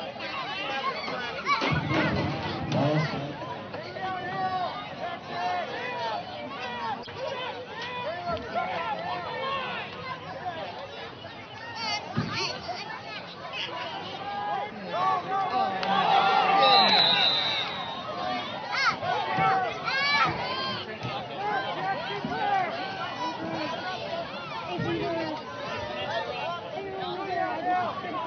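A corrupt frame decoded at 7.03 to 7.08 s. Over these 50 ms, bits inside compressed data were flipped, and the decoder played the damaged frames instead of discarding or concealing them. The misread gains and codes put energy at frequencies where the sound has none, across what fits a couple of frames. The result is a brief spurious event laid over the audio, a chirp, squeak, blip or noise burst, with its error peaking at around -30 dBFS.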